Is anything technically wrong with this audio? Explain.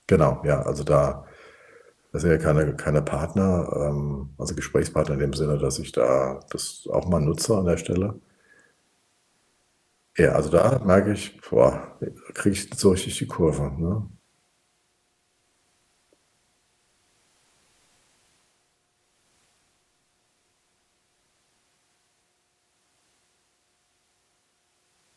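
No, nothing technically wrong can be heard here.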